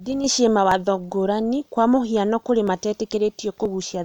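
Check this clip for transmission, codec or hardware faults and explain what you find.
The clip has one fault type, audio missing between chunks, at 0.72 s (just before "ngũrani kwa mũhiano kũrĩ"), 2.68 s (just after "ngũrani kwa mũhiano kũrĩ") and 3.66 s. Each is a short skip, roughly 20 ms lost and spliced without silence, on a grid that fits a likely one-second chunk boundary.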